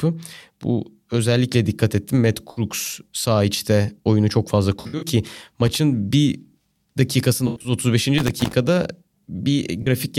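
At 2.51 s, just before "sağ içte oyunu çok", there is AAC frame loss with concealment. About 64 ms of audio goes missing, which points to three lost frames. The decoder patches the gap from the last good spectrum, so the sound turns briefly smeared and phasey instead of cutting to silence. A second, longer patch runs from 4.81 to 5.08 s, right after "içte oyunu çok fazla". About 149 ms is lost, scattered over roughly 213 ms, with the longest run near 70 ms, so the smearing flickers in and out.

From 5.66 to 5.76 s comes loose connector crackle, a contact making and breaking as it moves. The signal is chopped into an irregular scratchy burst. It differs from the concealment patches because it adds harsh, random clicks on top of the sound, whereas the codec patches sound soft, noisy and smoothly filled.

Concealment returns from 7.47 to 7.72 s, after "bir dakikasında". About 128 ms is lost across roughly 171 ms, and the longest gap is around a tenth of a second. 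The filled-in spectrum smears the sound before the audio recovers.

The crackle comes back from 8.18 to 8.53 s as a longer, uneven stretch of scratching.

A final short concealment at 9.82 to 9.88 s covers about 43 ms, which fits two lost frames. It leaves only a brief phasey blur.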